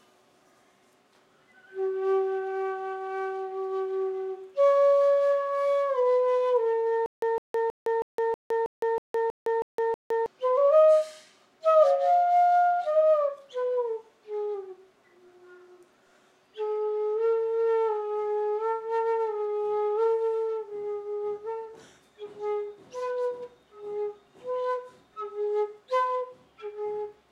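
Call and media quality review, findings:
Stutter with silent gaps, 7.06–10.26 s. Same ~158 ms fragment repeats 10 times, each followed by ~162 ms of digital silence, period 320 ms. Likely player/stream buffer underrun: each retry replays the last fragment, then runs dry. Content for that stretch lost, not delayed.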